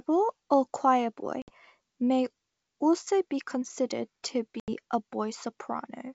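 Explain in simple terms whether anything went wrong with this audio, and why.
Yes, twice this speech suffers packet loss on an ADPCM call. Near 1.42 s about 60 ms vanishes into abrupt silence just before "may also be considered", and at 4.60 s, right after "also be considered to", about 80 ms drops out, roughly three or four packets each time. Unlike a simple dropout, the sound comes back slightly wrong, with a click or roughness, because the receiver's running guess of the signal lost track and must catch up.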